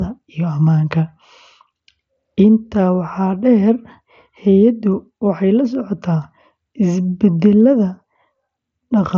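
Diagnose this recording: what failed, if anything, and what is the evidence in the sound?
Nothing failed here; the speech just comes over what sounds like a wideband Bluetooth headset link using mSBC, with its top end running out around 7.7 kHz as you'd expect from that path.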